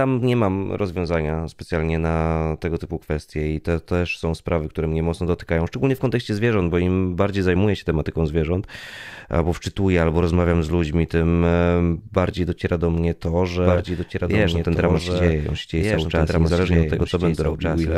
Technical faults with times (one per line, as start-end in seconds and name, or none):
13.61-17.98 doubled audio track